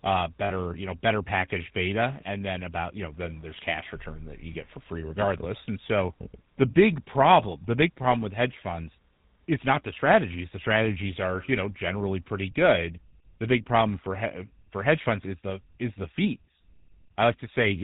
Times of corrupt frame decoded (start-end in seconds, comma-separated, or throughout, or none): none